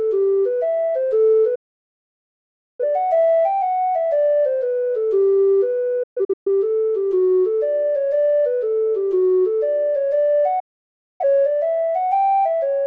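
At 1.55 s the audio drops out until 2.84 s, a digital broadcast dropout: the receiver stopped getting valid frames and muted, so about 1.2 s of programme is simply gone. A second, broken-up dropout between 6.03 and 6.48 s leaves several short holes, the longest 128 ms, and a third mutes 10.60 to 11.23 s. Each cut fades in about 8 ms, showing on a waveform as flat gaps and on a spectrogram as clean vertical blanks.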